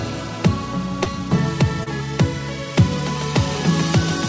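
At 1.04 to 1.07 s and at 1.83 to 1.88 s, short concealed packet loss occurs. Each time, 20 ms of audio arrived too late. The receiver extended the preceding sound to cover the gap, then blended back. Both sound like brief smears.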